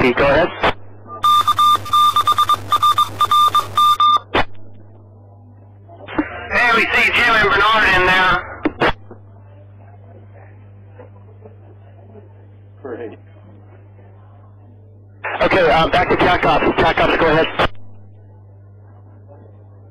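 A mains hum runs under the whole clip from the first moment. It is a steady low tone at 50 Hz, sitting roughly 30 dB below the programme level. Power-line energy has leaked into the signal path, most often through a ground loop or a transformer placed too close to the cabling. The tone never changes. It stays audible behind the sound and is most obvious wherever the material drops away.

From 1.23 s to 3.96 s the sound turns harsh and buzzy. A rough, buzzy distortion clings to everything in that span. Quieter stretches stop being clean and fill with a gritty noise floor instead. A stuck bit is the likely cause. One data bit holds a fixed value, so about half the samples land off by a fixed step of roughly -25 dBFS. That step tracks the waveform's shape, which makes the distortion follow the sound and turns near-silence into noise. After 3.96 s the buzz clears, while the hum continues underneath.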